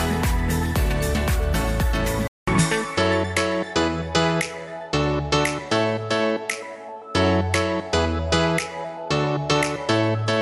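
At 2.28 s the audio drops out for about 200 ms and then resumes with a different character that lasts to the end: nothing remains above 11.4 kHz, the level shifts by roughly 5 dB, and a new steady noise floor sits roughly 45 dB below the signal. This points to the input likely switching to a poorer device. On a spectrogram the upper band is sharply cut off after the gap. The waveform shows a short flat silence followed by a changed amplitude envelope.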